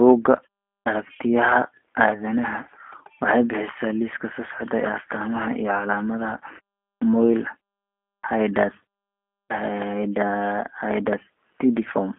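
Throughout, the speech carries plainly audible G.729 codec damage. Rebuilt from filter and pulse models at what sounds like 8 kbit/s, it sounds rough and synthetic, with nothing above 3.8 kHz.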